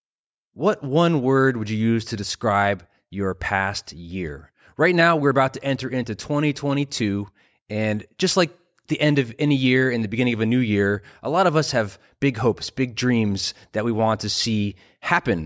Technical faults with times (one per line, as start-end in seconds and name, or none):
none